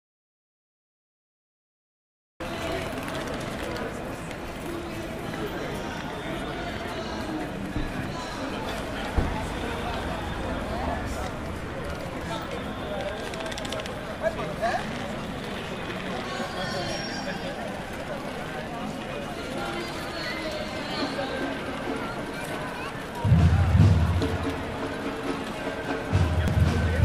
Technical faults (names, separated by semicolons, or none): audio dropout to silence; damaged data in a compressed stream